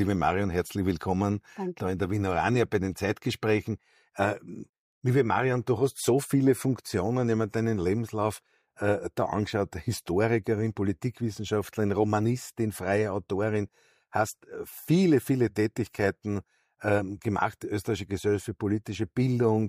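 No technical faults can be heard anywhere in the audio.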